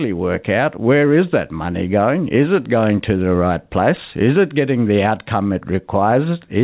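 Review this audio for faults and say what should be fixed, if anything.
No faults turned up in this audio, so nothing needs to be fixed.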